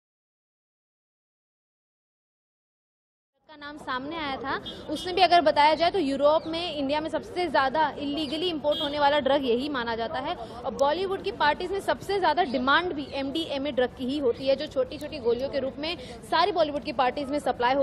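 No faults are audible; the only level change is an editor's smooth fade-in, rising from around 3.5 s and reaching full level at 4.36 s with no click or hard edge.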